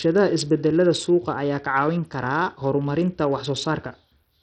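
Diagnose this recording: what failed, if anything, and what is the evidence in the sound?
Codec stage: heavy damage throughout the speech, treble thin and gritty, likely Bluetooth SBC compression; a bit pool fitting 64 kbps starves the upper sub-bands.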